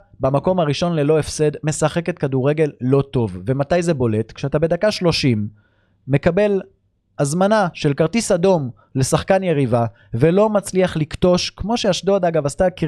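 No technical faults can be heard at any point in the recording.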